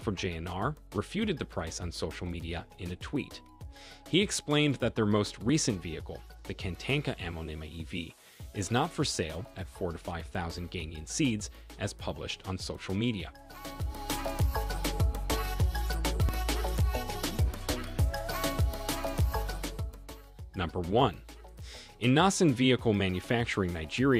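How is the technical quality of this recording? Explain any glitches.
Two brief glitches break the recording's continuity. Dropped buffer (overrun), at 5.49 s and 16.29 s: each time the sound jumps forward with no gap, likely because roughly 10 ms of samples were overwritten before being read, splicing the surrounding audio directly together.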